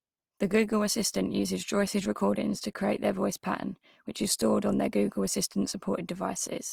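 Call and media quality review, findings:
Opus compression artefacts, whole clip: speech comes across grainy, rough and noisy, with little swirl and full bandwidth kept. Likely Opus in CELT mode starving bands and refilling them with folded or noise content, which fits around 24 kbps.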